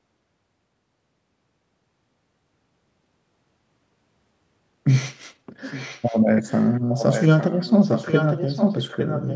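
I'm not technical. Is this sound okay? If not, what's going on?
No. The likely cause is an echo leak: someone on the call is using a loudspeaker, and their echo cancelling didn't fully block the speech their microphone picked up, so it got sent back. You hear a faint second copy of the speech arriving about 0.86 s late, from 5.71 to 6.2 s, very faintly again from 6.45 to 6.7 s, then more strongly from 6.88 s to the end.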